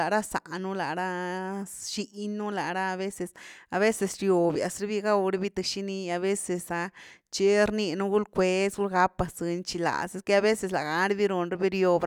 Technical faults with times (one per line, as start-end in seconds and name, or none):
none